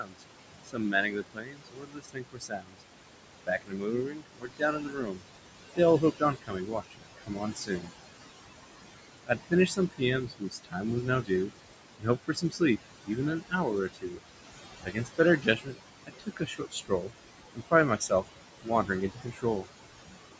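A speech recording with noise suppressor artifacts throughout: the room noise, sitting about 10 dB under the voice, is pulled down by about 20 dB between phrases, visible as patchy, flickering background in the spectrogram. Speech cut by the noise suppressor occurs across 0.0–2.83 s, 3.46–7.9 s, 9.26–14.23 s and 14.83–19.66 s, with drops of up to about 22 dB totalling two or three seconds per span. Soft consonants and word tails are swallowed, showing as abruptly notched envelopes in the waveform and faded upper-band energy below the 8 kHz call-bandwidth ceiling.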